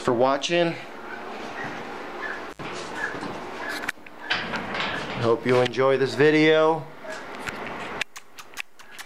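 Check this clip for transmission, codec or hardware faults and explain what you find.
One hardware fault is audible. An intermittent contact occurs between 2.50 and 2.60 s, where a loose cable or plug briefly loses its connection. The signal path opens for about 66 ms, so the audio drops out abruptly, with crackle at the break and again where the contact closes. While the line is open, faint hiss remains in place of the sound, before the full signal snaps back in.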